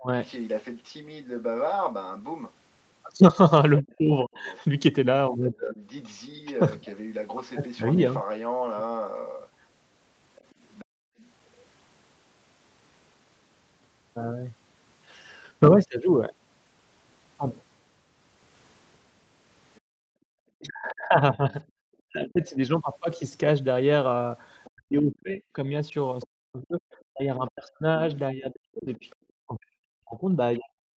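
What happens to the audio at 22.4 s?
At 22.4 s the speech falls inside a stretch from 20.56 s to the end where it dips, sinking by up to about 40 dB. This is likely speech suppressed in double talk: the echo canceller mistook the talker for loudspeaker echo.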